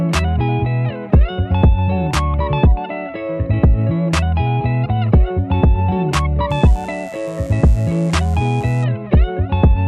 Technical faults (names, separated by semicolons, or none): mains buzz